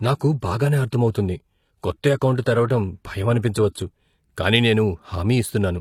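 Adaptive stream starting at a low bitrate, 0.0 to 4.0 s: the player opened on a cheap rendition to start quickly. Speech sounds thin and swirly with synthetic treble, fitting 20 kbit/s HE-AAC. At 4.0 s it jumps gaplessly to a fuller sound consistent with 96 kbit/s AAC-LC, cut off above 14.9 kHz.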